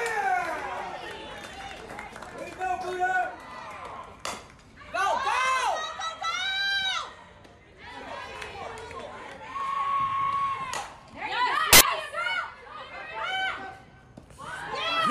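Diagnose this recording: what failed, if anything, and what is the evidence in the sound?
Sample-format conversion failed briefly: from 11.73 to 11.81 s, samples built from the wrong bytes turn about 80 ms of audio into a burst of loud, harsh broadband noise. The misassembled low-order bytes dominate each value, so the waveform jumps to large, erratic hash and the spectrogram shows a broadband block.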